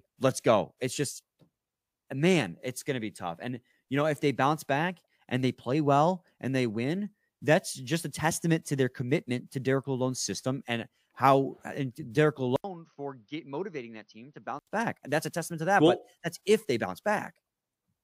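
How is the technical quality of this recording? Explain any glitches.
One glitch stands out, between 12.56 s and 14.67 s. After a gap of about 80 ms, the sound turns duller, loses everything above 6.2 kHz and drops about 10 dB, with a faint new background noise. This is likely an input switched to a poorer device. Unlike a plain filter or codec change, the tone, level and noise floor all shift together at a brief silence.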